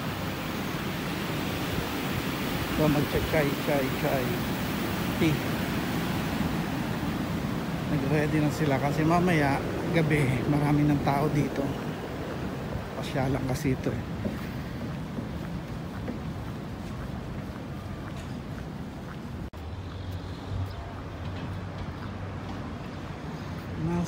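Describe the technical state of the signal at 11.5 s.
At 11.5 s the signal is intact, with no dropout, distortion, glitch or other fault audible at that point.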